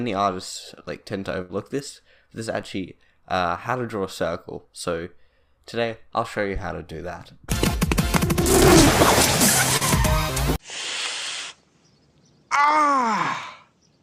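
A burst of packet loss hits the audio from 1.41 to 1.51 s: about 80 ms never arrived, and the receiver stretched the last sound for 78 ms while fading it. On a spectrogram this shows as a smeared, decaying band before the signal resumes further along. At 9.77 to 9.83 s, a short concealed packet loss drops about 40 ms, bridged by 34 ms of synthesized continuation. It is heard as a brief smear, and the waveform shows the fill blending back into the real audio.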